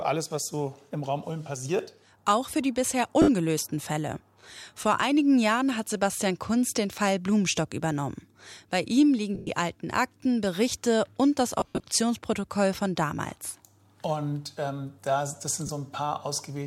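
Lost LE Audio frames at 3.22–3.28 s (60 ms), 9.35–9.50 s (120 ms, longest gap about 100 ms), 11.60–11.84 s (170 ms in scattered gaps) and 15.67–15.69 s (20 ms). The LC3 decoder refills each gap from the last spectrum with randomised signs, smearing tones into noise.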